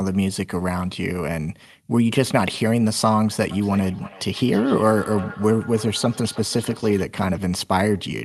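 Speech in which, from 3.51 to 7.09 s, each phrase comes back as a thinner, ringing repeat roughly a third of a second later, at about 17 dB below the voice. This is feedback echo between two devices: a second device in the room replays the call into the microphone, and the echo canceller never sees that playback.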